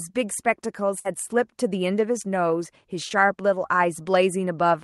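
From 0.99 to 1.07 s there is a burst of packet loss: about 60 ms of speech never arrived, and the receiver stretched the last sound for roughly 52 ms, fading it before resuming further on. Unlike a brief concealment, it is heard as a held buzz or dying hiss followed by a skip.

At 3.09 to 3.12 s a short concealed packet loss replaces about 20 ms with a continuation of the preceding sound, blended back in. At this length it comes across only as a quick smear or wobble, through a call path whose top end stops near 12 kHz, as fits Opus at around 32 kbps.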